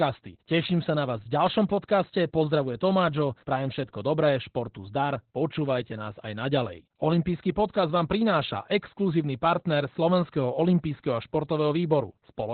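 The speech sounds muffled, hoarse and faintly robotic from start to finish, with the top end gone and the voice's texture reduced to a coarse, buzzy approximation. This is heavy Opus voice compression. The codec is running its SILK linear-prediction coder in narrowband mode, keeping only the band up to about 4 kHz, and the roughness fits a very low rate of around 8 kbps, where the excitation signal is coded too coarsely to carry natural vocal detail.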